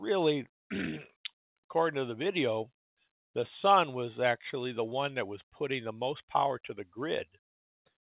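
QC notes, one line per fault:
No fault to list, so this one line covers the clip, with the call path's band ending at 4 kHz.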